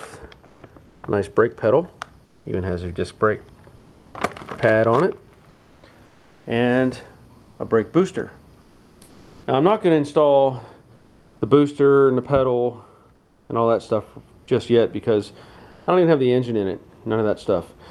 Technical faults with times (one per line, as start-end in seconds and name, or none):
0.45-2.45 comfort noise in place of the background
3.77-4.13 comfort noise in place of the background
5.49-9.47 comfort noise in place of the background
10.95-11.41 comfort noise in place of the background
13.15-13.49 comfort noise in place of the background
15.71-15.87 comfort noise in place of the background